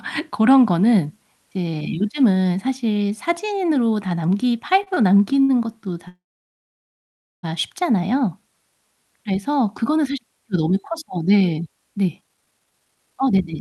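Late packets emptied the jitter buffer three times, producing short stalls from a late packet at 4.83–4.88 s, 4.94–4.99 s and 5.43–5.51 s. Each stretches the preceding sound by about 30, 22 and 59 ms, so it hangs briefly with a faint buzz or dip before continuing.

From 6.08 to 7.45 s there is a call audio freeze, likely caused by packets held up in transit. The last sound trails off, then about 1.24 s of silence follows before the audio resumes where it stopped.

At 12.05–13.54 s a jitter buffer speed-up trims the excess buffered delay by cutting many pitch-period slices, roughly 0.7 s in total. The audio runs at about 151% speed, audibly hurried but at unchanged pitch.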